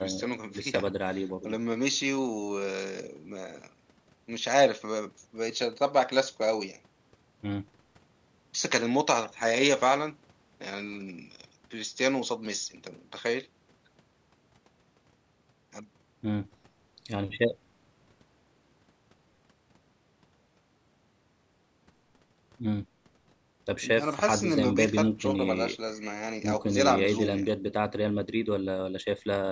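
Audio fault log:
No faults heard anywhere in this speech recording.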